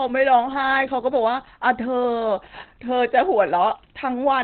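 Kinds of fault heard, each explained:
Opus compression: The speech sounds muffled and hoarse, with nothing above about 4.4 kHz and heavy codec damage throughout. This is likely Opus in its narrowband SILK speech mode, which points to a very low rate near 12 kbps.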